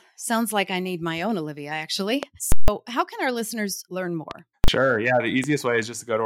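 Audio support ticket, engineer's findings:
Loud pops at 2.23–2.25 s, 4.31–4.33 s (just after "can our listeners learn") and 5.44–5.46 s. Single sharp thumps, roughly 15, 10 and 10 dB above the speech, which continues underneath. Likely cause: a voltage step from a plug, switch, static or driver glitch, shaped by the downstream circuits.

Invalid numbers at full scale at 2.52–2.68 s, just before "how can our listeners", and at 4.64–4.68 s. The first is a 160 ms block: a loud pop at each end, silence between. The second is 40 ms and heard as one bang. Cause: a DSP calculation returning infinite or invalid values, clamped to full scale for the whole block.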